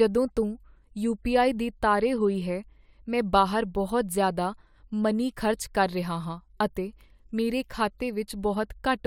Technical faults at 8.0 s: none

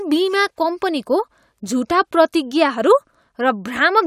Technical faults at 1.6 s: none

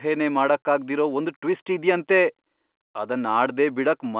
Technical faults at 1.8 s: none

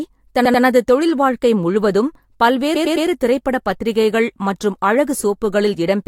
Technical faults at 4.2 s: none

